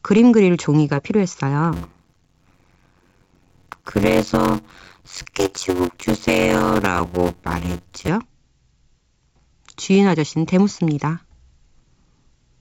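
From 1.72 s to 8.08 s there's a block size mismatch with zero padding. Each short write, which fits 256-sample blocks, gets topped up with silence, so you hear a buzz at about 92 Hz while the speech drags at 0.533 times speed, timbre unchanged. The G.722 coding underneath stays clean.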